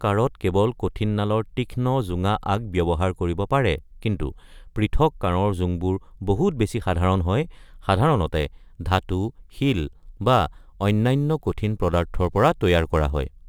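From 8.29 s onward, crude rate conversion by dropping samples, fitting a 48 kHz to 44.1 kHz change, adds an inharmonic fizz that follows loud speech, unlike constant hiss.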